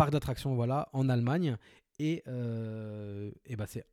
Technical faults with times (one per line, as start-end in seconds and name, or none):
1.27-1.29 loud pop